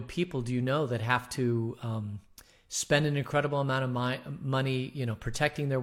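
Listening to the speech, nothing stood out as a technical fault at any point.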